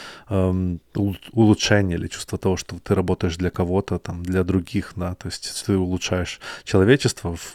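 No technical faults are audible anywhere in this speech recording.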